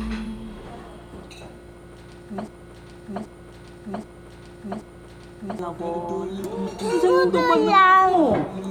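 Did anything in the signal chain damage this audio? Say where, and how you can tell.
Yes. From 2.48 s to 5.59 s a broken-record loop plays: a 0.78 s fragment repeats exactly, back to back, four times, and the audio due in that span never arrives. This likely points to a stalled playback buffer or stream that kept resending its last held block.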